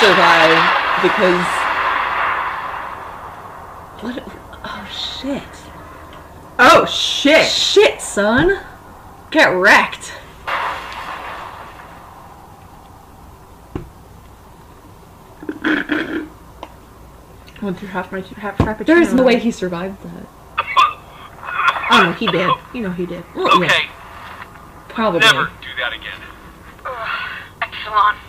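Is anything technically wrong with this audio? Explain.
Yes. Damaged data in a compressed stream disrupts the audio at 1.14, 19.18 and 27.61 s, each lasting under 20 ms. Corrupted bytes make the decoder misread frames, lose sync and hunt for the next header, leaving a brief glitch that shows as a narrow vertical break in the spectrogram and waveform.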